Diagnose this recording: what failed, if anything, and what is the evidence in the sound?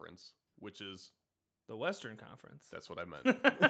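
The speech and the background beneath it swell together from 0.52 s to 2.33 s, rising about 4 dB. This is automatic gain rising in the call processing. The gain control judged the input too quiet and raised its gain gradually, lifting everything at once.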